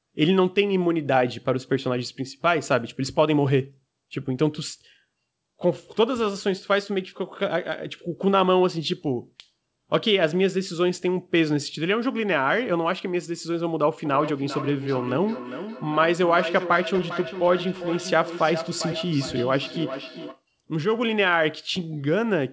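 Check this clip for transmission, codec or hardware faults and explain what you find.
One fault is present, a feedback echo between two devices, running from 14.05 s to 20.44 s. The speech comes back at a steady interval of roughly 0.4 s, each return thinner and more ringing than the last, the strongest about 11 dB below the direct speech. Two devices in the same room are on the call: one plays the other's audio, that microphone picks it up again, and neither echo canceller removes sound it did not play itself. Throughout the clip the band stops at 8 kHz, which fits a G.722 wideband call path.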